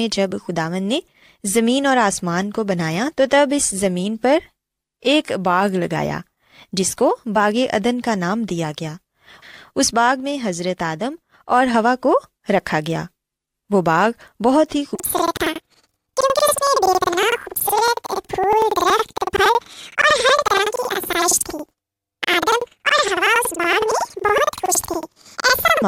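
From 14.95 s, planar audio read as interleaved replays each 93 ms block twice at double speed. Speech jumps an octave, flutters at 10.8 Hz, and shows doubled harmonic spacing on the spectrogram.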